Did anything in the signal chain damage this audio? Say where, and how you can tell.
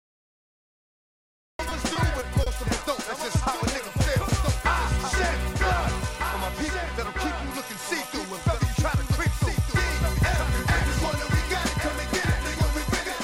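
Yes. The recording starts late, so the first 1.59 s is digital silence, then sound begins abruptly mid-event with no attack. That is a cut-off start at capture or storage.

Between 1.69 and 2.48 s the network jitter buffer ran empty four times. Each gap was filled by continuing the last sound, about 90 ms in total, longest 30 ms. That causes repeated stalls (stutter).

Throughout, a full-band copy trails about one and a half seconds behind, about 5 dB quieter, with no room colour. This doubled audio track likely comes from a second capture path.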